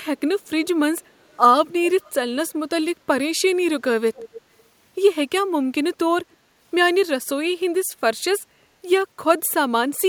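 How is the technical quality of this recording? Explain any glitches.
The recording has one recurring glitch, an echo leak. Faint copies of the speech come back about 277 ms late at 1.01–1.37, 1.84–2.14, 4.15–4.42 and 4.58–4.63 s. They sit roughly 20 to 40 dB below the speech. The likely cause is a speakerphone on the other end whose echo canceller didn't fully remove what its mic picked up.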